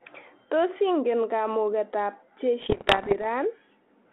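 A speech clip carried over a telephone-band ADPCM path, with audio limited to roughly 250 Hz to 3.4 kHz, which fits G.726 ADPCM at 32 kbit/s. From 2.6 to 3.25 s, just after "ingen kamuketab", bit errors on an ADPCM link, at a rate that sounds like around a couple of percent, corrupt the difference codes. Each wrong bit throws off the decoder's adaptive step size and predictor, so the damage rings on briefly, heard as pops, rough gritty bursts and quick jumps in level.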